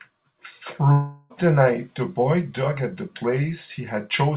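At 0.92 s the speech breaks off and, for about 0.4 s until 1.32 s, a long network dropout is the likely cause: the receiver stretches the last sound into a fading buzz rather than leaving a gap, and the speech resumes with that stretch missing. On a waveform the envelope decays smoothly with no flat silent section. On a spectrogram, already empty above 4 kHz from the G.711 call path, smeared repeating harmonics show through the gap before normal speech returns.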